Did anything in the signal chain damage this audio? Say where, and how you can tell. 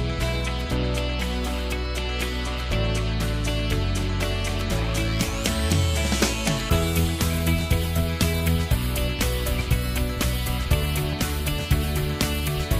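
Yes: a loud pop, a double one, between 11.13 and 11.32 s, peaking a few dB above the sound, which continues beneath it. It is likely an electrical transient from a plug or switch in the analogue wiring. The waveform shows two sharp spikes; the spectrogram shows two full-band vertical lines.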